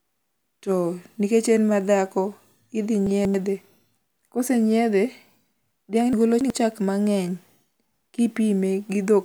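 At 3.07 to 3.34 s and again at 6.13 to 6.50 s, just before "chak mang'eny", the speech jumbles: chunks out of order. A roughly 93 ms block plays two, then three, blocks late. Unlike a dropout, nothing goes missing or silent. The sound is only rearranged, with three hard joins.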